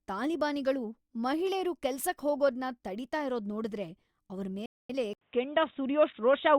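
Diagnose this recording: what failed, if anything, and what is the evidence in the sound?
At the playback stage, the speech stops mid-flow at 4.66 s and stays silent for about 235 ms until 4.90 s, then continues. This is a playback stall, likely caused by the player's buffer running dry or its output thread being blocked.

At the input stage, after 80 ms of silence at 5.13 s, the speech continues to the end with a narrower band, a level shift of about 5 dB, and a faint new noise floor. This points to the input switching to a poorer device, likely a narrower-band microphone or a headset call profile.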